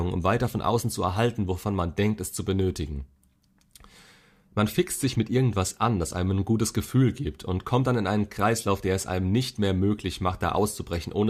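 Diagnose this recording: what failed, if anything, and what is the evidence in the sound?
No fault can be heard.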